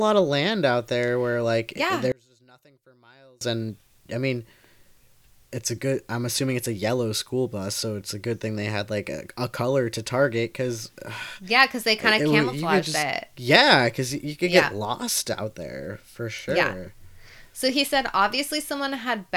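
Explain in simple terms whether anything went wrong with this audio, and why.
One channel was likely inverted from 2.12 to 3.41 s, so the matching halves cancel each other and the speech almost vanishes between "there where like yeah" and "and I mean".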